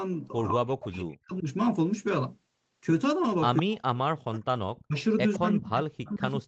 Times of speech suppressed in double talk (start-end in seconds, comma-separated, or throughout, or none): 0.50-1.47, 3.60-4.95, 5.37-6.47